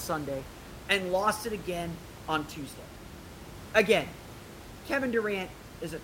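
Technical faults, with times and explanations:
No technical faults detected.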